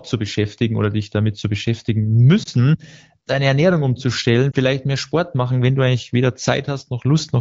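Around 2.43 to 2.48 s and again at 4.51 to 4.56 s you get a quick dip or warble in the speech. That's lost AMR speech frames. Each gap fits a single 20 ms frame that failed its checksum, so the decoder patched it by reusing the last good pitch and vocal tract settings at lowered gain. Because only one frame goes missing each time, it's a brief wobble rather than a fade to silence, sitting on top of the light coding texture of the AMR wideband link.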